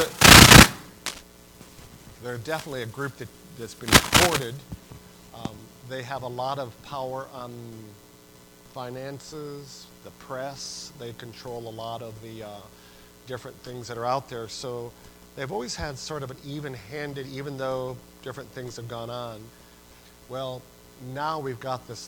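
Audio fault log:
1.06–1.23 s, cable scratch noise: likely a worn cable or connector shifting, its contact resistance jumping rapidly, adding a brief, uneven scratching burst about 10 dB below the sound.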